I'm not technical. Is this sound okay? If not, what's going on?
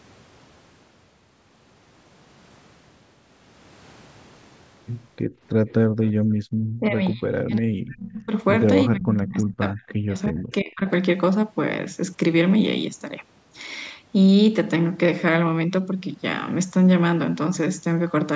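No. Between about 5.3 and 10.8 seconds, the call's echo canceller (the part that stops the other person hearing themselves) misbehaves in three ways.

Background gated by the echo canceller: from 5.26 to 5.41 s and again from 5.88 to 6.52 s, the room sound suddenly dips away and then comes back. The canceller briefly turned the microphone down hard while the loudspeaker was playing.

Echo leak: at 5.69 to 5.73 s and 6.05 to 6.11 s, faint scraps of voice come back about a third of a second late. These are likely bits of loudspeaker sound that the canceller missed and sent back down the line.

Speech suppressed in double talk: from 6.8 to 8.31 s, 8.87 to 9.81 s and 10.04 to 10.82 s, the voice sinks or cuts out in pieces. This is likely because both sides spoke at once, and the canceller turned everything down.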